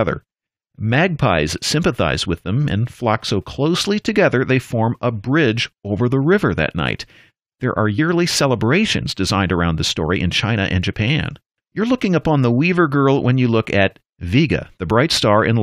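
At 7.98 s, damaged data in the compressed stream makes the decoder lose sync and hunt for the next frame, leaving a brief glitch just before "celebrations designed around the".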